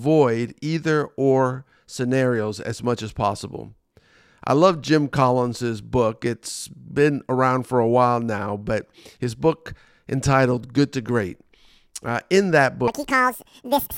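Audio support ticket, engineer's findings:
Audio read two samples at a time (double speed), 12.88–13.98 s, right after "in that". Speech runs 2x fast, pitch up 12 semitones. Probable decoder/format mismatch pairing samples per frame. Spectrogram: harmonic spacing doubles.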